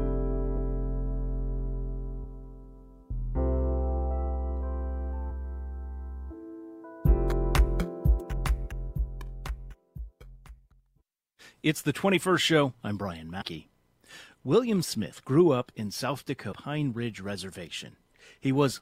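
At 13.40 to 13.42 s and again at 16.51 to 16.54 s, damaged data in the compressed stream makes the decoder misread frames and lose sync, giving short glitches. Each shows as a brief disruption on the spectrogram and in the waveform.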